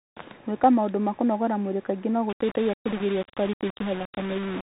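Speech passed through a Bluetooth CVSD headset codec throughout, which fits a 64 kbps link, so everything above 3.8 kHz is gone and s sounds turn scratchy over a granular hiss. From 2.29 s to the end, just after "kũnogora mwĩrĩ kaingĩ no", the audio was likely reduced to a low bit depth without dither, roughly five bits with rounding. The result is a grainy distortion that tracks the speech and sits not far below it.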